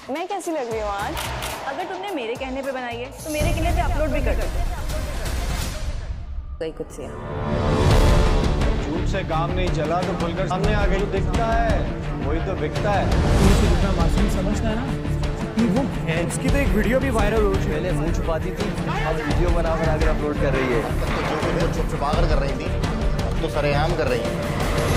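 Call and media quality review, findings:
Damaged data in a compressed stream: corrupted or lost bytes in the encoded file or transport, so the decoder misreads frames, drops sync and hunts for the next valid frame header. Heard as five brief chirp or blip artefacts, each under 20 ms, at 1.14, 3.58, 6.60, 10.50 and 16.23 s. Probable component: storage or delivery path ahead of the decoder. Irregular spacing fits sporadic corruption rather than a periodic buffer or clock fault.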